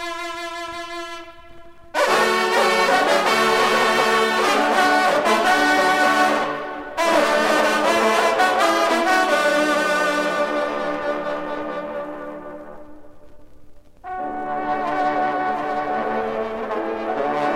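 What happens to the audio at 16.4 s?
At 16.4 s the sound is heard twice: a second, somewhat quieter copy trails the original by roughly 0.7 s, clean and full-band with no reverberant tail. This is a doubled audio track, which begins abruptly at 15.49 s and runs to the end of the clip. The copy sits around 5 dB below the original. The likely cause is the same signal being captured again through a slower path, or an edit that left two misaligned copies layered together.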